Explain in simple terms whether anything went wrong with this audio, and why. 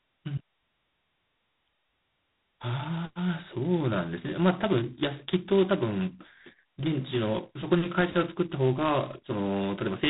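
A harsh, rasping hiss rides on the speech for the whole clip, growing louder as the talking gets louder, and the sound is muffled, with nothing above about 3.9 kHz. That is heavy G.726 ADPCM coding, a telephone method that describes each moment as a crude guess of change, too coarsely here.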